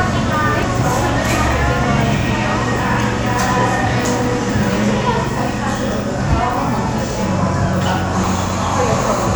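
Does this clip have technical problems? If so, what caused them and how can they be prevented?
Yes. The likely cause is a dropped buffer (overrun): the recording software fell behind and the audio hardware overwrote samples before they were collected, so those stretches were lost and the audio on either side was joined directly. This everyday-sound recording skips ahead at 0.63 s (roughly 70 ms missing) and at 3.51 s and 6.78 s (around 20 ms each, smaller skips). Giving the capture thread higher priority and using a larger input buffer would prevent this.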